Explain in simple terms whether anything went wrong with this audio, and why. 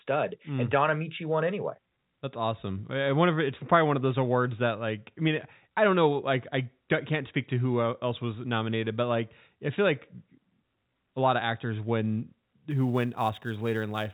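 From 12.70 s to the end at 14.14 s, a faint hiss and roughness rides on the speech, strongest on loud, bright sounds. That is sample clock jitter: the converter's timing wobbles by a few millionths of a second, so samples land slightly off.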